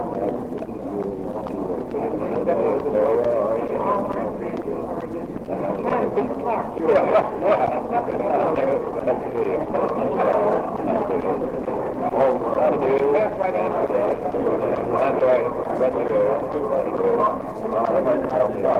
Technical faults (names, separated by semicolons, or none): none